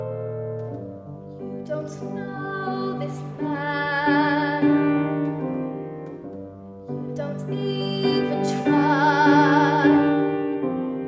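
No technical faults can be heard anywhere in the audio.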